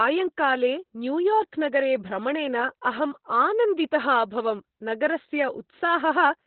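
Throughout the speech, heavy Opus voice compression in its SILK mode cuts the band to narrowband, leaving nothing above 4.2 kHz, and codes the excitation coarsely, which fits a bitrate near 8 kbps. Voices sound muffled, hoarse and faintly robotic; a spectrogram shows a flat ceiling at 4.2 kHz.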